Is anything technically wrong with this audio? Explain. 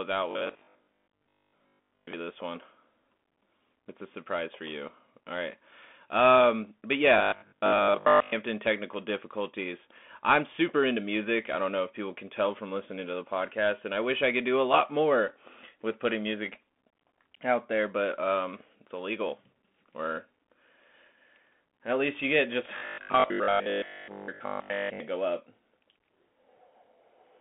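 Yes. The whole clip has the sound of a Bluetooth CVSD headset codec. This one-bit delta coding at 64 kbps keeps only about 200 Hz to 3.4 kHz, so sibilants come out scratchy and a grainy hiss sits under the speech. On a spectrogram, everything above 3.4 kHz is an empty band.

Robotic sound from repeated short buffers occurs from 0.31 to 2.13 s (ending just before "this one"), from 7.18 to 8.36 s (before "technical difficulties I'm super"), and from 22.78 to 25.0 s (between "at least you get" and "go up"). The speech turns into a rigid 50 Hz metallic buzz. This is likely caused by starved playback looping the last chunk, which fits a 20 ms buffer, with most of the audio in these stretches being repeats. The waveform shows roughly repeating 20 ms cycles, and the spectrogram shows evenly spaced horizontal harmonics.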